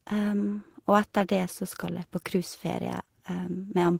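No technical faults can be heard anywhere in this speech recording. There is nothing in it that needs to be marked at any point in time.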